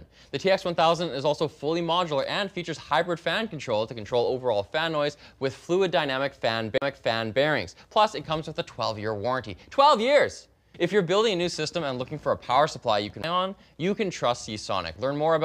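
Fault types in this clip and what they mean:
CD skip: the laser jumps to another turn of the disc's spiral, so playback ticks, mutes briefly and resumes from a different point. It happens at 6.78 s with about 40 ms of silence and at 13.23 s with a far shorter gap. Unlike a dropout, the sound doesn't continue where it stopped.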